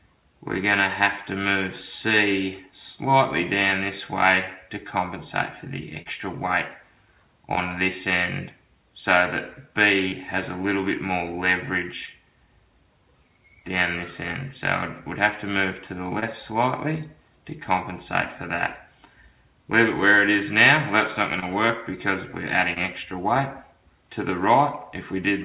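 Short concealed packet loss occurs at 6.02, 7.55, 10.08, 12.06, 16.20, 21.40 and 22.74 s. Each time, 20 to 40 ms of audio arrived too late for the decoder. The receiver bridged the gap by extending the preceding sound and then blending back into the real signal. The result is a brief smear or wobble rather than a click or a hard silent gap, which is what separates it from an unconcealed dropout. The audio over this call path has nothing above 4 kHz, which points to a G.711 mu-law link at 64 kbps.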